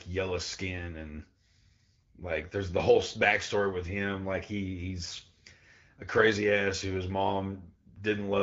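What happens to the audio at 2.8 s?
Nothing goes wrong at 2.8 s; the speech there comes through intact, carried by the AMR wideband (HD Voice) codec at 12.65 kbit/s, a rate at which speech stays clear.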